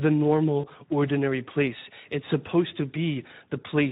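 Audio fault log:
throughout Speex codec: the CELP encoder is running short of bits for its excitation, which fits a bitrate around 11 kbps. The speech is reconstructed from a coarse approximation, giving a plainly audible noisy, hoarse roughness over every syllable.
0.59–0.66 s VoIP packet loss concealed by the speech codec: about 40 ms of audio went missing, which points to two lost 20 ms frames. The decoder extended its last pitch and filter with falling gain, producing a brief fading stretch that leaves the speech weakened going into "ordinary place".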